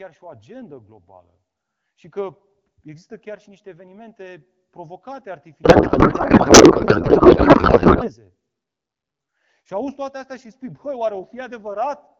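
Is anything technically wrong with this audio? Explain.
Yes, there's a codec payload misread from 5.63 to 8.13 s: the speech turns into garbled noise and warble that barely tracks it, which fits octet-aligned AMR frames being unpacked as bandwidth-efficient.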